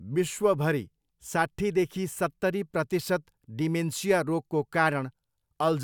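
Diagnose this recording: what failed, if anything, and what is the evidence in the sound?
Nothing in the signal chain has failed, and the speech recording carries no audible defect at any stage from capture through to playback.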